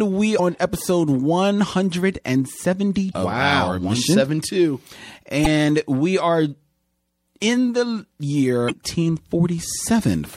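The whole speech clip has a watery, swirly quality. Sibilants chirp and sound metallic, and consonant attacks smear. This is likely MP3 compression at a low bitrate, which fits about 64 kbps. Starved of bits, the encoder drops the treble and lets weak frequency lines flicker between frames.

Four short glitches mark damaged data in a compressed stream. They fall at 0.36 s, 3.10 s just before "of wow", 5.42 s just before "we are", and 8.66 s. Each lasts about 40 ms. Corrupted frames there throw the decoder out of sync, so it skips ahead to the next frame header.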